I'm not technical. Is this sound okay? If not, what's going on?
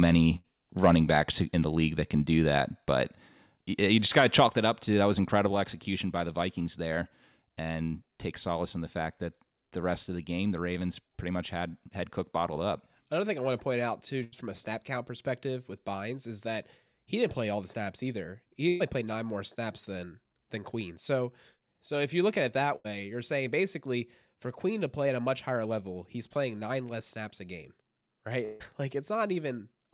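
No. There are several faults, heard through what sounds like a narrow phone-line channel.

Burst of packet loss at 0.36 s, 14.24 s, 18.68 s (just before "played nine more snaps") and 22.76 s (between "at it that" and "you're saying basically for"). Pieces of audio, each roughly a tenth of a second, never arrived. The software stretches the last sound into a fading buzz or hiss, then jumps ahead.

Microphone overload at 0.84 s (just before "backs in the league") and from 4.17 to 4.44 s. The loudest moments were too strong for the microphone input, so their peaks are chopped flat, likely giving a harsh, crackly edge.

Microphone volume stepped down at 2.58 s, 4.47 s and 5.49 s. The level drops suddenly, each time in a single step, likely because the call software lowered the microphone after the loud peaks.

Long network dropout from 28.44 to 28.63 s. Audio likely stopped arriving for about a fifth of a second, so a fading buzz or hiss fills the gap and that part is missing.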